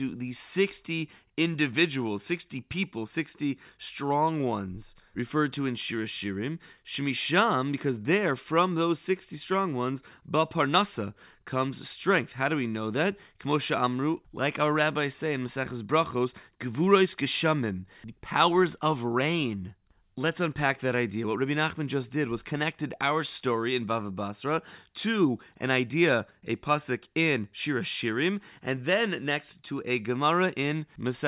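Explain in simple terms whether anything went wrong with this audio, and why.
Nothing went wrong here.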